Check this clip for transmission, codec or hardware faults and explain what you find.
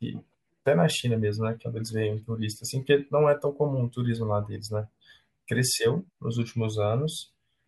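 No faults turn up anywhere in this speech recording. There is nothing in the audio that calls for further explanation.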